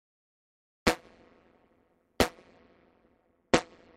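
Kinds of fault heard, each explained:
Overlap-add ripple: a harsh, metallic buzz runs through the whole clip, the level dipping and recovering so deeply, by about 60 dB, that the sound is chopped at a rate of around 150 Hz, adding extra tones around each note. The audio was split into windowed frames and rejoined with an overlap whose windows do not add up to a steady gain, so the loudness swings once per frame, and that frame rate becomes the buzz you hear.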